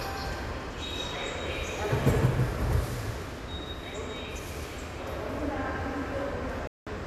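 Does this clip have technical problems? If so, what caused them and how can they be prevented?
Yes. From 6.67 to 6.87 s the sound abruptly mutes for about 0.19 s. This is a digital broadcast dropout: the receiver lost several frames and stayed silent until clean frames returned. Stronger reception, a better antenna or more robust error protection would prevent it.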